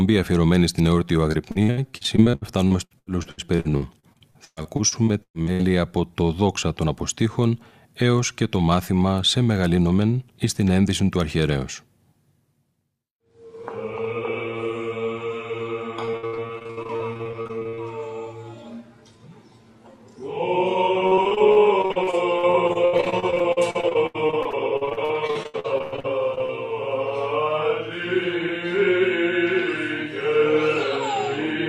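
Repeated packet loss (robotic sound) hits at 1.31–5.61 s, 16.05–17.79 s and 21.07–26.51 s. Dozens of dropouts, up to 120 ms each, are patched by stretching the last sound, leaving about a third of each stretch choppy, with pieces missing.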